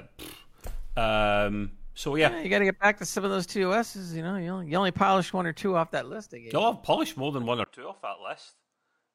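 At 7.64 s the speech drops out for about 20 ms, then continues to the end about 10 dB quieter, with nothing above 9.8 kHz and a new background noise roughly 50 dB below the voice. That combination points to an input switched to a poorer device, likely a different microphone taking over mid-recording. A plain low-pass filter or EQ change would alter only the tone. Here the bandwidth, level and noise floor all shift at once, right after the brief gap.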